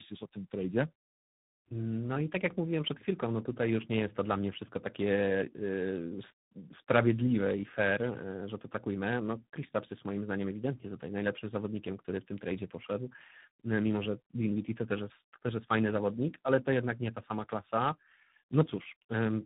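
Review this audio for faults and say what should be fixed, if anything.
Tandem speech coding runs throughout. G.726, then G.729A, then G.726 again each re-encoded the previous coder's output, leaving rough, muffled, warbly speech with nothing above 3.8 kHz. To prevent it, keep one codec end to end or use transcoder-free operation, so the speech is coded only once.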